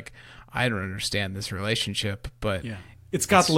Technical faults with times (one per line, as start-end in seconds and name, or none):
none